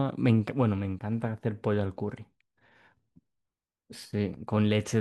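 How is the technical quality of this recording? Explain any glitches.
No glitches can be heard in this recording. The speech continues without any audible technical fault.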